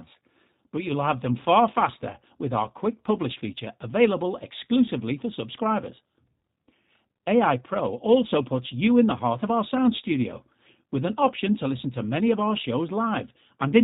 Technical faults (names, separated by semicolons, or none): G.729 codec